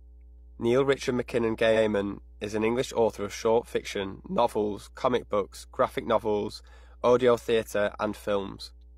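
Repeated frames at 1.72 to 1.81 s, just before "is an", make this speech recording stutter. A slice of about 93 ms is played a second time straight after itself, so the same fragment of sound is heard twice and the clip grows by that 93 ms. The duplicated block fits a short run of compressed frames, probably two, being written or delivered twice, so the decoder simply replays them. Mains hum at 60 Hz runs through the whole clip as a steady low tone sitting roughly 25 dB below the speech, with a few low harmonics above it. That frequency points to the power line leaking into the signal path, most likely through a ground loop between connected equipment or a transformer close to the cabling or microphone.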